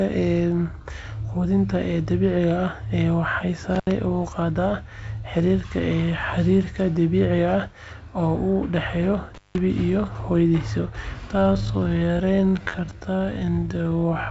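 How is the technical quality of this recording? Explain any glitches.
The recording has two brief dropouts and a slowed ending. It is band-limited to about 7.7 kHz, which fits wideband G.722 telephone coding.

Intermittent contact appears at 3.75 to 3.91 s and 9.35 to 9.58 s. A loose cable or plug opens briefly. The sound cuts out for about 74 ms, then about 173 ms. Crackle marks each edge. Faint hiss fills the gaps.

A time-stretched section runs from 11.31 s to the end. The pace drops abruptly to 0.585 times normal speed while pitch stays the same. The likely cause is software repeating short pieces to lengthen the audio. This leaves the speech dragging.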